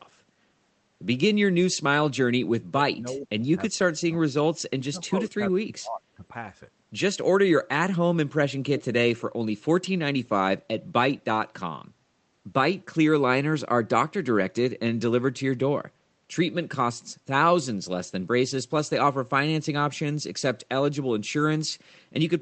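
From 2.46 to 3.5 s, and again from 4.68 to 6.23 s, the speech drops sharply, by around 30 dB at its deepest. The likely cause is speech suppressed in double talk. An echo canceller mistook overlapping talk for echo and turned it down.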